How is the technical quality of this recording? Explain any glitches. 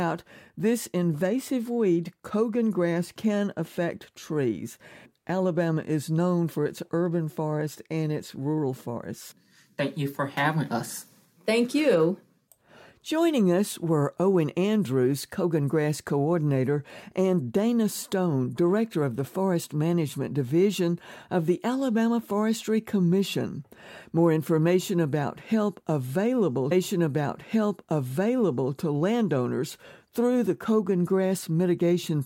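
There is one glitch, a stream segment repeated, between 26.71 and 28.73 s. Right after "information about help available", the playback jumps back and about 2.0 s of the speech plays a second time before continuing with "to landowners through the". The player fetched or queued the same chunk of the stream twice. It hears as a brief click at the jump point followed by an exact replay of the preceding passage.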